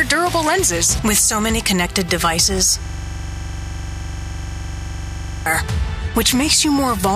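At 2.86 s a system hang loop starts and runs to 5.46 s. The system froze while the hardware replayed one 42.7 ms slice, which fits a 2048-sample buffer. It repeats at 23.4 Hz as a machine-gun stutter. Roughly three seconds are lost.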